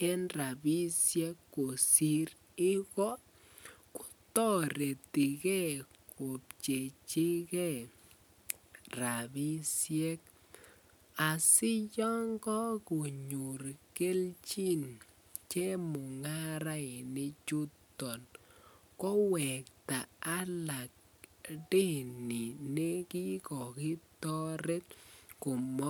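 Listening through this recording of speech, nothing technical stood out as a problem at any point.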